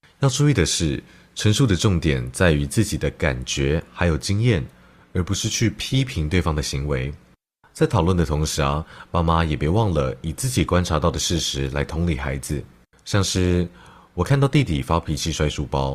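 From 4.76 s, a slowed connection drops the speech to an adaptive stream at a lower bitrate, Opus 64 kbit/s falling to 24 kbit/s, and codec artefacts rise. The spectrogram changes abruptly, with no waveform gap.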